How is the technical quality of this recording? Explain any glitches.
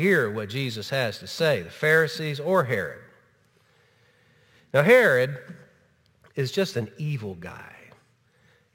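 The recording has a single fault present throughout: sample clock jitter.

From start to finish, the converter's clock wanders by roughly 7 microseconds rms. Each sample is captured slightly early or late, so the error scales with how steeply the waveform is changing. The result is a grainy hiss about 25 dB below the signal that swells on loud, bright passages and disappears in quiet gaps. A spectrogram shows a broadband noise haze that tracks the signal's level and high-frequency content instead of a steady noise floor.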